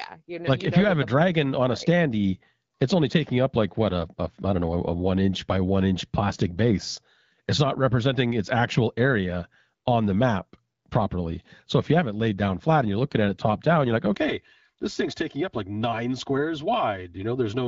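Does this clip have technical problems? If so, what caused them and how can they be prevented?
Yes. From 14.14 s to the end, channel delay (comb filtering) makes the speech hollow and phasey. One channel arrives about 3 ms late and cancels in the mono sum, cutting fixed notches from around 150 Hz upward. Unlike reverb, nothing smears in time. Aligning the channels before summing to mono prevents this.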